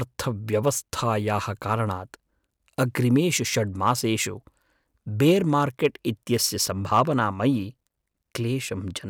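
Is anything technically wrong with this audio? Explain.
Yes, there is hard clipping in this speech. At 3.87–3.91 s and 5.85 s the peaks overdrive the stage by about 2 dB and are cut flat, giving brief crackle. From 6.93 to 7.24 s the overload reaches about 4 dB, and the flattened waveform adds high harmonics heard as crackle on the peaks.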